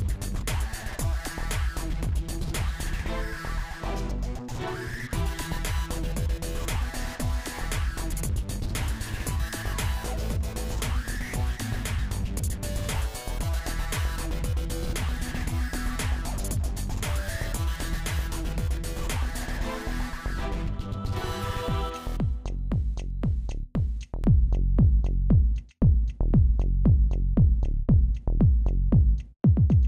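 From 24.24 s to the end of the clip at 29.88 s, the audio turns dull and muffled, as if a blanket had been thrown over the top end, with detail and air draining away. This is de-emphasis applied wrongly: a treble-cut curve meant to reverse pre-emphasis was applied where none existed, or applied a second time. The result is a smooth downward slope, leaving 10 kHz about 11 dB below 1 kHz.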